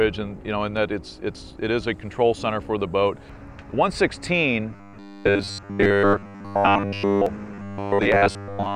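New audio likely arrived too seldom, so the last 10 ms kept being replayed while most of the real audio was skipped. From 4.71 to 7.26 s and again from 7.52 to 8.75 s, this robotic sound from repeated short buffers becomes a rigid, metallic 100 Hz buzz.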